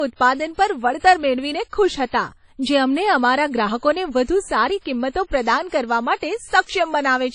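The whole speech clip has nothing above 10.1 kHz and a dull, smeared top. That's likely low-bitrate audio saved at a high bitrate, with the first encode's losses baked in. At 5.38 s, between "ગ્રાહકોને વધુ સારી કિંમતો" and "પ્રદાન કરવા", there's a bit error spike, a single sharp broadband tick from a flipped bit that fits one corrupted sample. Another hits at 6.69 s that fits a run of about three samples.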